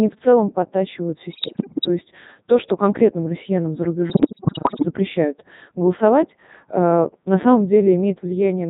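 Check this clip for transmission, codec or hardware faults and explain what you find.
Two faults are present: the whole clip runs through a low-rate vocoder, and two short bursts suffer radio bit errors.

Codec 2 vocoder, throughout: the speech is coded at 3.2 kbit/s. Only pitch, voicing, energy and spectral envelope are sent, and the decoder rebuilds the voice from sine waves. The damage is heavy. The voice sounds robotic and buzzy.

Bit errors on digital voice radio, at 1.32 to 1.88 s, after "в целом подтачивают" and before "есть то что конкретным", and again at 4.10 to 4.85 s, after "что конкретным россиянам за": around one bit in ten is flipped. Each bad bit corrupts a frame's pitch, level, voicing or spectrum. The voice jumps and warbles into robotic gibberish.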